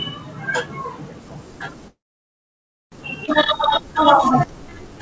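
At 1.88 s the sound stops and stays stopped until 2.94 s. A short fading tail gives way to about 0.95 s of silence. Then it resumes where it left off. Nothing is lost. This is a call audio freeze, likely from delayed packets draining the jitter buffer.

At 3.26 s there is a skip ahead. Roughly 0.7 s of audio is dropped, and only an 18 ms bridge joins the two sides. Playback jumps forward almost seamlessly.

From 3.58 s to 4.99 s comes a jitter buffer slow-down. The receiver repeats pitch periods and pause fragments, adding 133 ms. Playback runs at 91% speed with unchanged pitch. Sounds stretch out slightly, and a faint warble may appear. Throughout, nothing reaches above 8 kHz, consistent with a wideband call codec.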